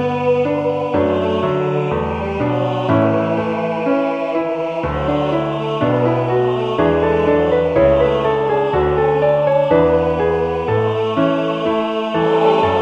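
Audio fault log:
0.12–12.78 s, clock slip clicks: faint, evenly spaced ticks, roughly ten per second, around a hundred in all. Each is one sample dropped or repeated, likely because two unsynchronised clocks drift apart by about 200 ppm.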